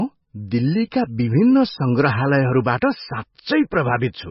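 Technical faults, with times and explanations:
Throughout, MP3 compression: the encoder was likely starved of bits, which fits a rate near 18 kbps, so it cut all treble above 5.6 kHz and switched weak frequency lines on and off between frames, leaving the speech dull, heavily watery and swirly.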